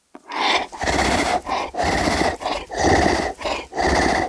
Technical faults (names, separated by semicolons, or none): wrong sample rate